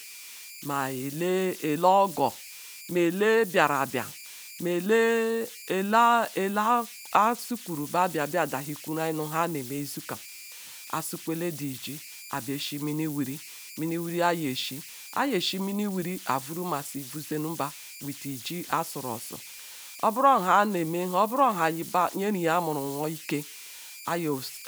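Throughout the speech, converter idle tones whistle near 2 kHz, about 17 dB below the signal, from undithered delta-sigma patterns; a spectrogram shows a thin horizontal line.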